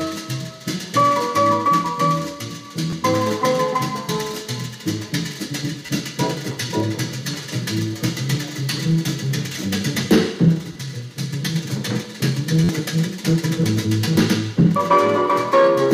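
At 2.90–2.93 s, 5.86–5.89 s and 10.73–10.75 s, a repeated buffer occurs: new audio arrived late, so the same 11.6 ms piece played twice more, which fits a 512-sample buffer, losing about 20 ms of sound each time. Each sounds like a hard click or brief buzz. At 12.64–12.69 s the piece repeats four extra times, giving a longer stutter with about 50 ms of sound missing.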